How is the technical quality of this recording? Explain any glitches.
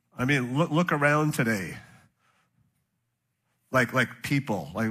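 One glitch stands out, an AAC frame loss with concealment at 1.67 to 1.74 s, just after "mean look look around". About 43 ms of audio went missing, which fits a single lost frame. The decoder rebuilt that stretch from the last good spectrum with randomised phase, so it sounds like a brief smeared, noisy, phasey blur. A plain dropout would leave a hard silent hole or click instead of this filled-in wash, and the loss is too short to decay to a faint noise floor.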